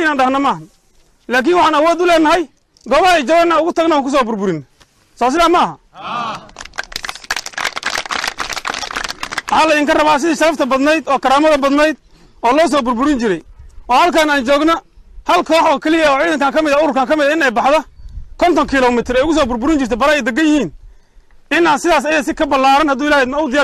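Nothing stood out as a technical problem anywhere in this audio on listening.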